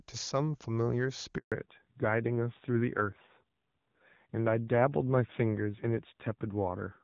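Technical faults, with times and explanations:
1.38–1.52 s, handover gap: the speech fades out within a few tens of milliseconds and stays silent for 140 ms. While the call was passed from one network to another, no speech frames reached the receiver, so whatever was said in that span is simply missing.
1.52 s to the end, fallback to narrowband: all content above 4 kHz disappears and the speech turns duller and rougher. After the handover the call left HD Voice, whose clean wideband sound before the gap fits AMR-WB at 23.85 kbit/s, and the narrower, coarser sound that follows points to AMR-NB at around 7.4 kbit/s.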